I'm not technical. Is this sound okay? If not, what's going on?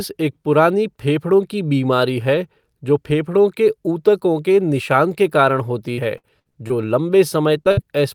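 No. Between 5.93 and 6.72 seconds, just after "के निशान के कारण", the speech turns choppy. This is repeated packet loss: pieces of the call went missing five times, the longest about 60 ms, and each hole was patched by stretching the sound just before it.

At 7.64 to 7.67 seconds there's a tiny smear or wobble. This is short concealed packet loss: about 20 ms of audio never arrived, and the receiver filled it by continuing the previous sound, then blended back in.

From 7.71 to 7.79 seconds a sound briefly hangs and fades before the speech picks up again. This is a burst of packet loss: about 60 ms arrived too late or not at all, so the last sound was held and faded, and that bit of speech is gone.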